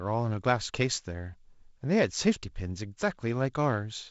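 No technical faults can be heard anywhere in this speech. The wideband telephone coding caps the sound at about 7.7 kHz and leaves a light hiss with slightly grainy low frequencies, which fits G.722 wideband telephone coding running at its lowest 48 kbit/s mode.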